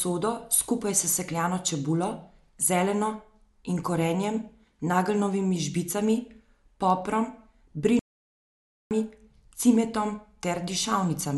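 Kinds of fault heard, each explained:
playback stall: the speech cuts to silence from 7.99 to 8.91 s, about 0.92 s, likely the player starving for data; far longer than a momentary dropout.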